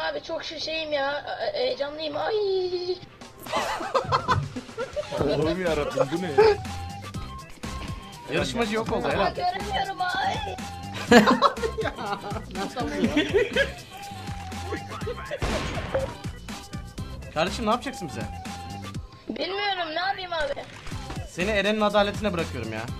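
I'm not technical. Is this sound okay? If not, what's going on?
Yes, nothing in this recording points to a technical problem with how the sound was captured, transmitted or stored.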